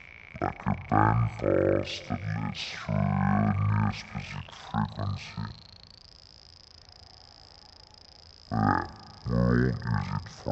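From the first moment to the last, this one has stereo read as mono. The left and right samples, which normally alternate, have been strung together as if they were one channel, so every second of audio takes two to play back. That gives you half speed and a pitch drop of a full octave, 12 semitones down, and everything sounds slow and heavy. There's also a fainter mirrored copy of the sound sitting up in the top half of the spectrum.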